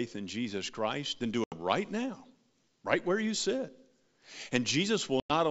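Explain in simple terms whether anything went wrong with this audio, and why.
Two short dropouts break up the speech, a fault known as packet loss on an ADPCM call. The first runs from 1.44 to 1.55 s, right after "then do" and before "now right where you". About 80 ms of sound vanishes, which fits a few lost packets. The second, from 5.20 to 5.32 s, loses about 100 ms. Each gap is filled with abrupt silence. The decoder also loses track of its running prediction, so the speech comes back slightly distorted before settling. The wideband G.722 call itself is clear apart from these gaps.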